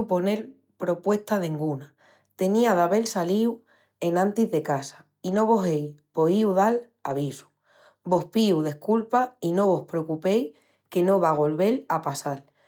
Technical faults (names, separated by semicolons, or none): lost packet rebuilt from error correction